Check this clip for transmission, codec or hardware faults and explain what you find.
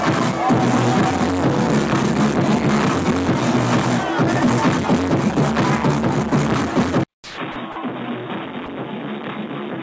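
Two faults appear in the last three seconds of the clip. Before them, the sound reaches up to 8 kHz, as expected for a 64 kbps G.722 call path.

Input switched to a poorer device, from 7.04 s to the end: after a gap of about 200 ms, the sound returns duller and boxier, about 10 dB quieter, with a new noise floor about 40 dB down. The likely cause is the system moving to a narrower-band microphone or headset profile. On a spectrogram, energy stops abruptly at 3.8 kHz after a blank vertical stripe. The waveform's envelope steps down at the same point.

Sound dropped by the voice detector, at 7.14–7.38 s, 7.52–7.56 s, 7.72–7.76 s and 8.66–8.68 s: brief stretches are replaced by steady comfort noise. In the first one, 140 ms of real sound goes missing. The likely cause is the detector treating quiet sound as background and pausing transmission. On a spectrogram these show as short patches of flat, featureless noise interrupting the structured content. 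In the waveform they appear as low, even-amplitude segments.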